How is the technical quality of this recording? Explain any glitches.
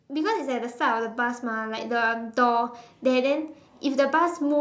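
The main glitch is an automatic gain rising, with the call's microphone processing capping everything at 8 kHz. From 0.07 to 2.42 s, the gain control judged the input too quiet and crept up by about 6 dB, so the speech and background swell together.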